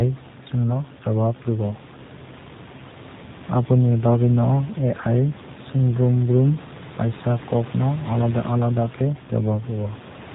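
From start to finish the speech carries G.729 codec damage, plainly audible. On a spectrogram everything stops at a hard 4 kHz ceiling. Each 10 ms frame is rebuilt from a vocal tract filter and a few pulses, which fits an 8 kbit/s stream. Voices sound rough and synthetic. The room noise, about 17 dB below the speech, warbles.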